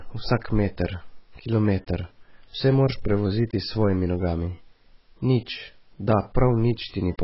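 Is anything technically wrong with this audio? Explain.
Yes. Throughout the speech, nothing is present above 5.6 kHz, and what remains sounds dull and smeared, with a warbling, fizzy edge on sibilants and held vowels. The likely cause is heavy AAC compression. That pattern fits an AAC-LC encode starved at around 16 kbps, which cuts the top band and quantises the rest coarsely.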